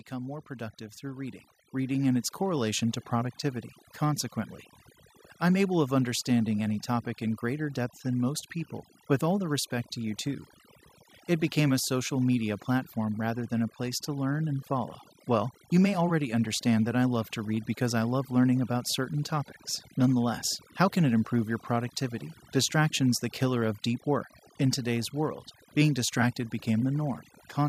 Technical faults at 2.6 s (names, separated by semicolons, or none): overdone noise removal; automatic gain rising